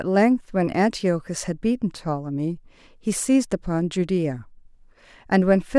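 Nothing along the way in this bit of speech stands out as a technical fault, so there's really nothing to point to at any moment.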